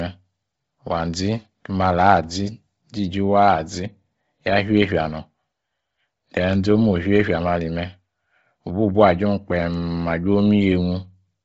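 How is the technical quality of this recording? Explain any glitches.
The recording is heavily degraded throughout. The speech is band-limited with nothing above 7.7 kHz and has a breathy, grainy edge, most likely from Bluetooth LC3 compression at a low bitrate near 24 kbps with short 7.5 ms frames. The encoder discarded much of the upper spectrum and refilled it with noise. A spectrogram would show a hard ceiling at 7.7 kHz and smeared, speckled texture in the upper bands instead of clean harmonics.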